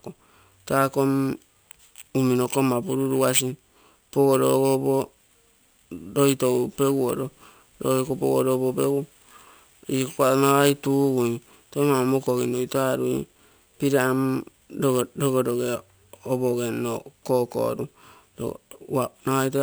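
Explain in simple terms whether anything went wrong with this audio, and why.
Imaging from sample-and-hold upsampling runs through the whole clip: a bright, metallic fizz above the speech. It points to audio at about 22 kHz raised to 44.1 kHz by repeating samples, creating mirrored copies between about 11 and 22 kHz. Unlike steady hiss, it rises and falls with the speech.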